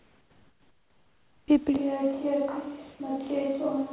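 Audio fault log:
0.00–1.48 s, comfort noise in place of the background: the real background is replaced by steady, featureless synthetic noise about 7 dB quieter, likely from discontinuous transmission during silence.
1.46–1.48 s, onset clipped by the voice detector: the first 20 ms of returning sound are missing, so it starts abruptly, likely because voice detection triggered late.
1.77 s to end, switch to a distant microphone: sound abruptly turns roomy and hollow with less bass, around 10 dB quieter, likely from a distant pickup replacing the close microphone.
2.96–3.00 s, sound dropped by the voice detector: 40 ms become steady noise, losing 20 ms of sound, likely because the detector mistook quiet sound for background and stopped transmitting.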